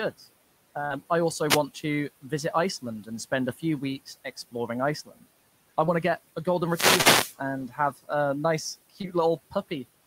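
A speech recording with a burst of packet loss around 0.85 to 0.97 s, where the receiver stretches the last sound for roughly 50 ms, fades it, then jumps ahead past about 40 ms of lost audio. Later there's short concealed packet loss at 5.85, 7.01 and 9.01 s, brief smeared patches of about 20, 40 and 20 ms where the decoder papered over missing audio. Room noise sits about 23 dB under the speech.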